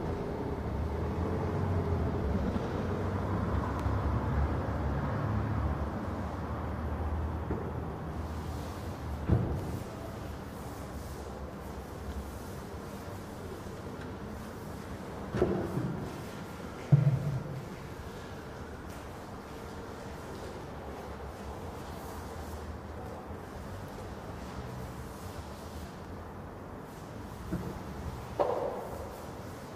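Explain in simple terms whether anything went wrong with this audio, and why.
A click repeats about every 0.97 seconds from 0.89 s to 28.95 s, roughly thirty times. These are likely clock drift buffer slips: two devices' clocks disagree slightly, so a tiny block of samples gets dropped or repeated. Unlike random glitches, these clicks are evenly spaced.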